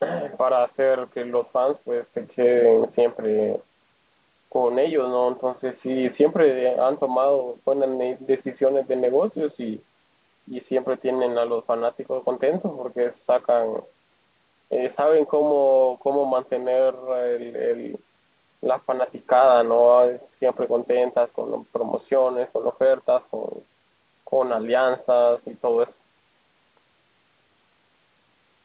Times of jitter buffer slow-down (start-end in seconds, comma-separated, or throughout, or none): none